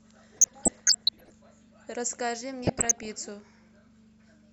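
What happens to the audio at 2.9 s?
DAB burbling from 2.62 to 3.12 s: bit errors from weak reception corrupt MP2 sub-band levels frame by frame, giving bubbling, chirping squelches over the speech.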